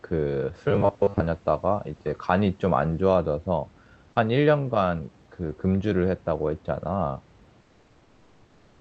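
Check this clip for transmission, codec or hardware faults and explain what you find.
Two faults show up: a short robotic stretch near the start and synthetic comfort noise over the last second or so.

From 0.71 to 1.24 s the sound goes robotic, with the repeated short buffers we'd expect from late or missing packets. A steady buzz at 100 Hz sits on top, which points to a buffer of about 10 ms being looped. Roughly half of that stretch is repeated material, with the real audio skipped over. The result is a stiff, metallic drone that still loosely tracks the shape of the speech.

From 7.61 s to the end at 8.80 s, about 1.2 s of the background is replaced by comfort noise. The sender's voice detector likely decided nobody was talking and went into discontinuous transmission, which fits Opus DTX. The receiver then generates smooth noise roughly matched to the room's spectrum. You hear the background, which sits about 35 dB under the loud parts, turn flat and textureless and drop by about 3 dB.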